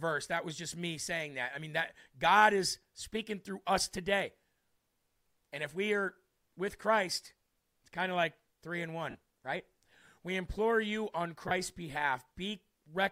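At 9.10 s, and again at 11.48 s, the speech smears briefly into noise for about 45 ms, then 30 ms. These are lost LE Audio frames: the LC3 decoder refilled each gap with the last spectrum under random signs, consistent with 7.5 ms frames.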